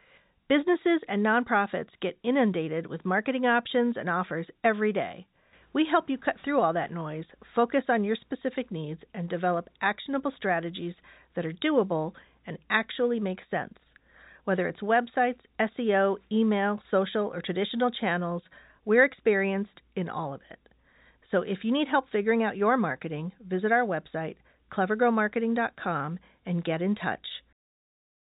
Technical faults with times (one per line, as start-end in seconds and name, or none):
none